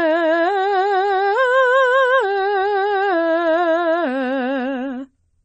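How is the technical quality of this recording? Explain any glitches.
The technical quality is poor. The music has plainly audible AAC compression damage from start to finish. Nothing sounds above 8.5 kHz, so the top end is dull. Sustained notes warble and smear. The likely cause is AAC-LC encoding at a low bitrate, around 32 kbps. To save bits, the encoder drops the high frequencies and quantises what remains coarsely.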